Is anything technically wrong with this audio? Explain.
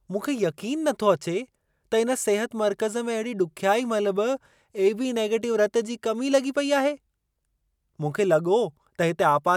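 No, nothing technically wrong can be heard here.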